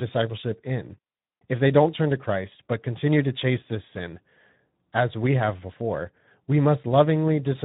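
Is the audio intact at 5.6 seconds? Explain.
No, at 5.6 seconds the speech is still carrying Speex codec damage, present throughout. Starved excitation coding leaves it hoarse and noisy, consistent with roughly 11 kbps.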